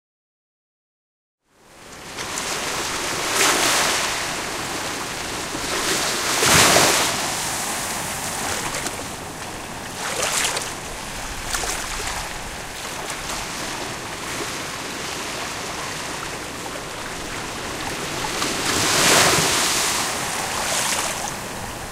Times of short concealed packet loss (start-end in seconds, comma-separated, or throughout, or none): none